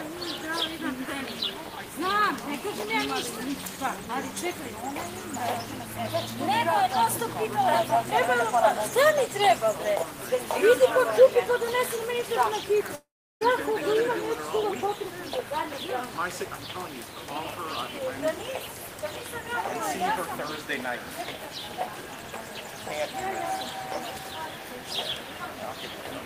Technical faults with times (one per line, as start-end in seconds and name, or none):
12.95-13.43 long network dropout